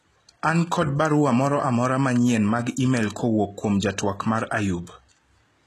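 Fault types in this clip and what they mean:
HE-AAC compression: the speech's treble isn't the original. It's likely rebuilt by spectral band replication from copied lower bands, so s sounds come out gritty and lispy. Nothing sits above 12.4 kHz, and the plainly audible damage suggests a very low bitrate, around 16 kbps.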